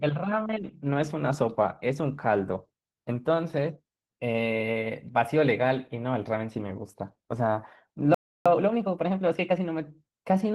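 Throughout the clip the speech carries Opus voice compression artefacts. The codec appears to be running in hybrid mode, with SILK linear prediction for the lower band and a CELT layer above 8 kHz. The excitation is coded coarsely, leaving the voice plainly hoarse and slightly robotic, which fits a bitrate of around 16 kbps.

At 8.14 s a playback stall cuts the audio to silence in mid-flow for about 0.31 s, until 8.46 s. The player most likely ran short of data or had its output thread blocked.

From 8.46 s to 9.70 s comes a time-compressed catch-up. The player clears the backlog by removing short segments and cross-fading across the gaps, so the speech runs 1.25 times faster at unchanged pitch.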